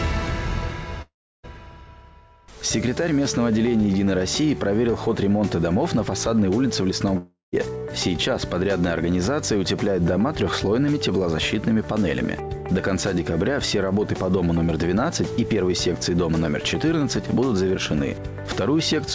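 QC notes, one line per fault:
1.02–1.45 s and 7.17–7.54 s, likely a long network dropout: the sound smears into a fading buzz, then goes quiet, losing about 0.42 s and 0.36 s. The receiver stretched the last audio until it ran out. The band stops at 8 kHz, which fits G.722.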